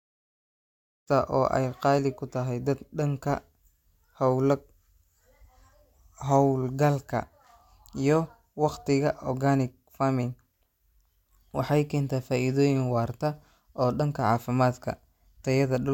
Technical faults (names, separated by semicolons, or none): none